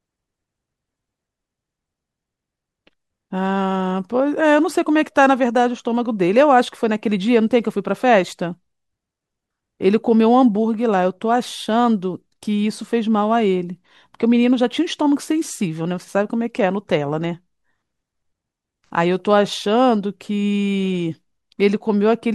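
Nothing in the recording stood out as a technical fault on listening.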